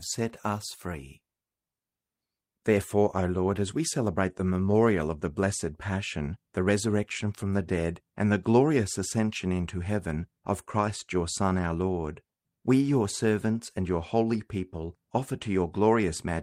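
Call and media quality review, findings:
No audible faults found in this speech recording.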